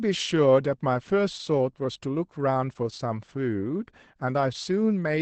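A speech clip passed through Opus voice compression running its SILK linear-prediction coder at a low rate, consistent with about 12 kbps in wideband mode. Throughout, the codec discards everything above roughly 8.6 kHz and models the excitation coarsely, so the voice loses its air and sibilant sparkle, sounding muffled and hoarse with a faint robotic edge. The coding damage is plainly audible from start to finish.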